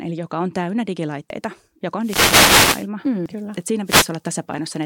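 Audio missing between chunks at 1.30 s, right after "eli joka on täynnä", and again at 3.26 s: a few tens of milliseconds vanish and the sides butt together, likely lost while a 2 s processing chunk closed. Wireless microphone noise hits from 2.01 to 2.88 s and 3.85 to 4.10 s: the radio signal faded, so receiver noise swelled into a swish of static over the speech.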